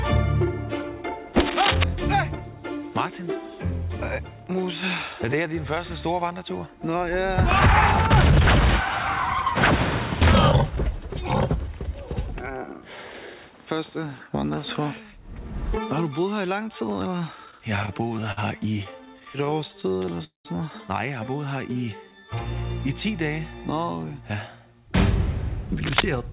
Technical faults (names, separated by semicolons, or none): cable scratch noise; repeated stalls (stutter); call audio freeze; jitter buffer slow-down